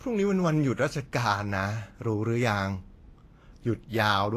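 Throughout the speech, Vorbis compression damage is plainly audible: the treble sounds hissy and grainy, consonant attacks are smeared, and tones have a rough edge. The likely cause is a low bitrate, around 33 kbps, that forces a lowered cut-off and coarse high-frequency quantisation.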